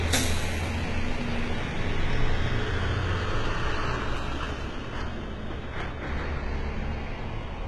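Everyday sounds throughout, carrying heavy HE-AAC compression damage from start to finish, likely from an HE-AAC encoder at a very low rate, around 16 kbps. Nothing remains above about 11.8 kHz, yet the upper band still sounds bright rather than dull, which separates it from a plain low-pass filter. That treble is rebuilt from copied lower bands, so its detail doesn't match what sits beneath it and comes across gritty and metallic instead of clean.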